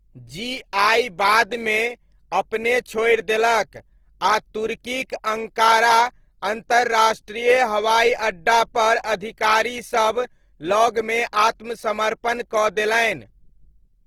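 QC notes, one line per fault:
Throughout, Opus compression: speech sounds grainy and rough, likely from a low-bitrate CELT encode filling starved bands with folded spectrum and noise.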